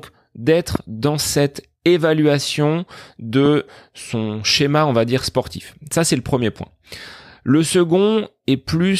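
The clip is speech with two loud pops. The first runs from 0.75 to 0.78 s, just before "dans cette évaluation", and peaks about 15 dB above the speech. The second runs from 3.46 to 3.48 s, just before "son schéma on va", at about 10 dB above. Each is a single sharp click, and the speech continues under it. The likely cause is a brief voltage spike from a switch, plug, static discharge or driver glitch.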